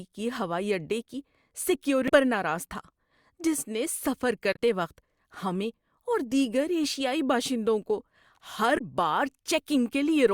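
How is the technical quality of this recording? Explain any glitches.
The recording has three brief glitches, all from damaged data in a compressed stream, at 2.05 to 2.10 s, 4.53 to 4.57 s and 8.75 to 8.81 s. Corrupted bytes made the decoder misread frames and lose sync, so each spot in the speech breaks into a short chirp, squawk, click or hole.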